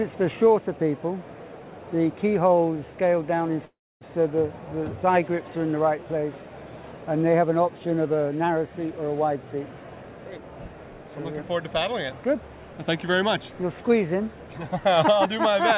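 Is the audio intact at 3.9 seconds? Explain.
No. From 3.65 to 4.04 s the audio breaks off, likely a long network dropout: the receiver stretches the last sound into a fading buzz, then silence. A spectrogram shows a smeared, decaying band, then a blank gap; the waveform flattens before the audio resumes.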